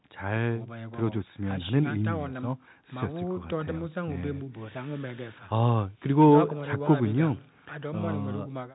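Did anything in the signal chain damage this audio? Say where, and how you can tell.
No, nothing in the signal chain stood out as damaging this speech on listening.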